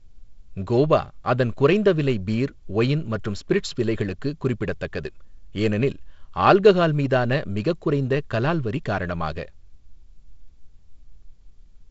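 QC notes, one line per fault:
Nothing stood out on listening to this speech clip carried over G.722 wideband telephone coding.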